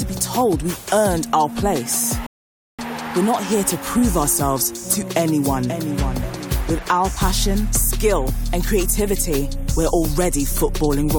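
At 2.26 s a rebuffering stall drops the sound to silence until 2.79 s; playback ran dry, then resumed exactly where it stopped, adding 0.52 s.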